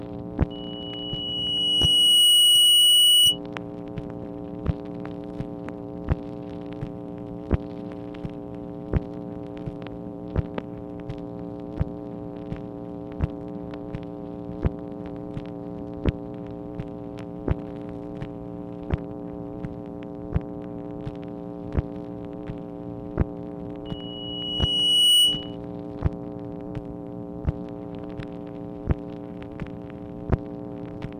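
From 0.50 to 3.39 s and again from 23.85 to 25.56 s, loudspeaker feedback squeal rings at 2.9 kHz. The microphone re-amplifies its own speaker output until the loop runs away. Unlike a steady interfering tone, it swells over a second or two to well above the programme.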